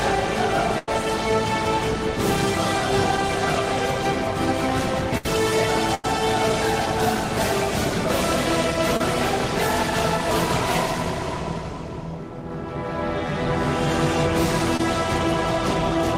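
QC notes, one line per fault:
0.78–0.88 s, 5.17–5.26 s, 5.94–6.05 s: burst of packet loss. Each gap is held over by stretching the last sound and letting it fade, giving a brief buzz or hiss of roughly 70–90 ms. The audio then rejoins later, with about 90, 60 and 90 ms lost.
8.97 s and 14.77–14.80 s: short concealed packet loss. The receiver patches holes of about 30 and 20 ms by extending the preceding sound and crossfading back, which is heard as a quick smear or wobble, and a short transient there may vanish.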